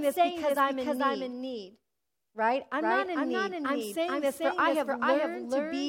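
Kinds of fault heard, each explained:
Doubled audio track, throughout the clip: every stretch of speech is heard twice, the second copy trailing the first by roughly 0.4 s and arriving at about the same loudness, so the two compete equally. The trailing copy carries the full frequency range with no reverb tail or room colouring, which sets it apart from a natural echo. The likely cause is the same signal being captured a second time through a slower path and mixed back in.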